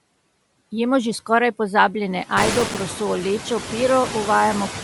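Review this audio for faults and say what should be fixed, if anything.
Noise suppressor artifacts run through the whole clip. The background is pulled down by about 17 dB whenever the speech pauses, then let back up under the speech. Around 2.5 s the room noise steps up by about 15 dB and ends up only about 13 dB below the speech. That rise is real room sound, but it gives the suppressor more to chew on. Unlike codec damage, the artifacts follow the gaps between phrases rather than the top of the spectrum. Keep suppression gentler, or record with less room noise, so the suppressor never has to cut this deep.

The whole clip also has a breathy, grainy sheen on the speech, and nothing is present above 11.6 kHz. The likely cause is Bluetooth LC3 compression. The hard band ceiling and noise-filled upper range point to a transform codec working with 10 ms frames at a modest rate, which fits a link running near 48 kbps. 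Suppressor artifacts pump with the pauses, while this graininess sits steadily on every syllable. Use a higher LC3 bitrate or a wired path so the codec keeps the upper band intact.

Processor overload crackle appears from 2.39 s to 2.80 s as a short burst of gritty tearing. Many tiny buffers missed their deadline in a row, and each miss dropped in a sliver of silence with hard edges. The spacing points to buffers of around 3 ms, with roughly twenty of them missed. A single codec glitch or dropout would be one event, while this is a dense cluster that stops once the load passes. Enlarge the audio buffer or reduce competing processing load so deadlines are met.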